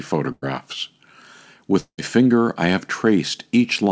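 At 0.32 s a burst of packet loss occurs. A short run of audio packets never reached the receiver in time, so it had nothing to play for about 100 ms. It covered the hole by extending the last sound and fading it down, heard as a brief held buzz or hiss until 0.44 s. The audio then picks up roughly 100 ms further on, so that stretch of speech is simply gone.

From 1.80 s to 2.00 s there is what sounds like a long network dropout, likely a stall in the connection rather than a few isolated lost packets. The receiver again stretched the last sound to fill about 180 ms, but the concealment decays and the final stretch, around 80 ms, is near-silent before speech resumes. That speech resumes about 180 ms further on, so that part is skipped.

Throughout, the band stops at 8 kHz, which fits a wideband call codec such as G.722.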